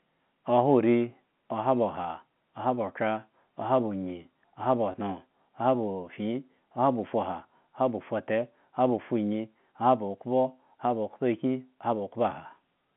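At 4.92 to 4.94 s there's packet loss with pitch repetition: about 20 ms of speech went missing, consistent with a single lost packet, and the receiver filled it by replaying the last pitch period, so you get a brief, slightly held buzz through the telephone-band G.711 sound.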